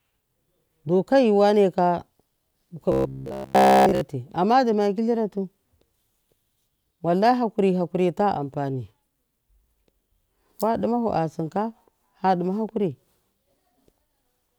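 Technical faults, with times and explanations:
2.92 to 4.01 s: robotic sound from repeated short buffers. The speech turns into a rigid metallic buzz at 66.8 Hz that follows the syllables only loosely, ending before "amma duma kilira tu". The likely cause is starved playback looping a chunk of about 15 ms across essentially the whole span while the real audio is skipped.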